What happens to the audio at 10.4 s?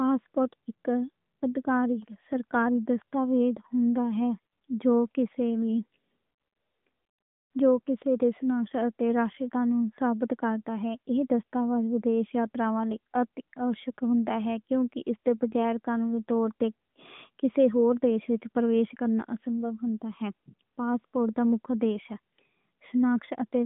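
At 10.4 s the speech carries AMR narrowband mobile codec damage, present through the whole clip. The codec rebuilds the voice from a vocal-tract model and sparse pulses, which fits a rate near 10.2 kbps. The band runs about 150 Hz to 3.6 kHz, with nothing above 3.8 kHz. The result sounds plainly buzzy and synthetic.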